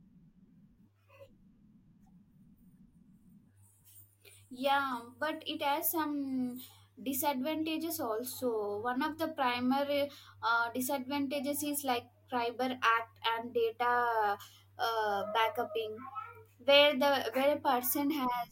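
At 4.91 to 4.94 s, right before "but it has", there's a corrupt frame decoded: a couple of damaged compressed frames got played anyway, so energy lands at the wrong frequencies. It comes out as a short chirp, squeak, blip or burst of noise, peaking around -30 dBFS.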